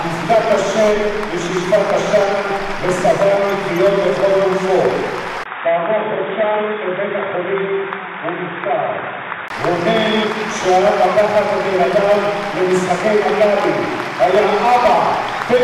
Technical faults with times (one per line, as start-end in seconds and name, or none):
5.44-9.50 input switched to a poorer device